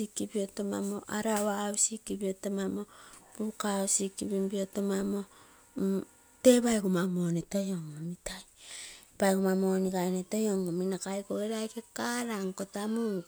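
No technical faults can be heard anywhere in this speech recording. There is nothing to point to at any moment in it.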